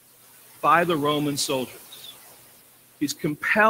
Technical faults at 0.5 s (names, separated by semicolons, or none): noise suppressor artifacts